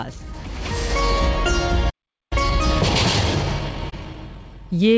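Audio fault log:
1.89 to 2.33 s, playback stall: the sound cuts out mid-flow and stays silent for about 0.41 s, then picks up again. That gap most likely means the player ran dry of data or its thread got held up, so nothing reached the output until it recovered. It's a clean dropout rather than a glitch, just dead air for a beat before things carry on.
2.33 to 4.98 s, time-compressed catch-up: right after the stall the audio runs hurried, about 1.1 times normal speed, yet the pitch stays where it was. The player is trimming its backlog by snipping out small slices and cross-fading across the joins. It keeps this up all the way to the end.
3.90 s, short concealed packet loss: inside the hurried stretch there's a tiny smear, around 20 ms of audio that never got to the decoder in time. The receiver papered over the hole by stretching out the preceding sound and blending back into the real signal, so what you hear is a quick smear or wobble rather than a gap. 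It sits on the call path, G.722 at 64 kbps with nothing above 8 kHz.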